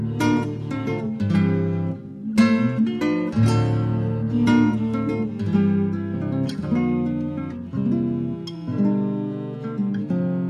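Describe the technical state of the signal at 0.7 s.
At 0.7 s the signal is intact, with no dropout, distortion, glitch or other fault to be heard at that moment.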